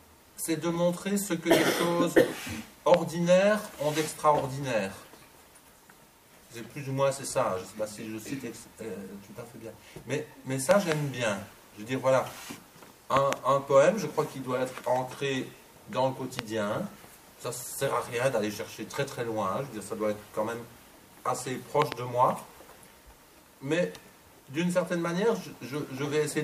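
Loud pops land at 2.94 s and 16.39 s as single hits, and at 10.71–10.94 s, 13.17–13.35 s and 21.82–21.94 s as quick pairs, peaking about 20 to 25 dB above the sound. Each is a likely electrical voltage step, from a plug, switch or static. Unlike a dropout, the sound carries on unbroken beneath each thump.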